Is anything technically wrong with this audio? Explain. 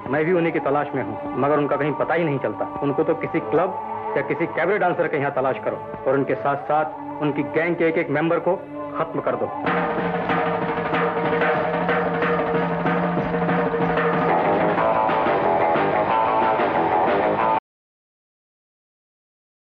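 Yes. At 17.59 s there is an audio dropout to silence. The sound cuts off into silence with no room tone for the last 2.0 s, likely from lost input while recording continued.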